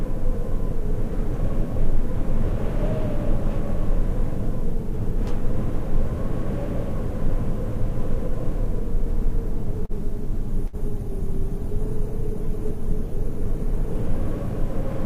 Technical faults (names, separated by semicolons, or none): short stall from a late packet; call bitrate drop; burst of packet loss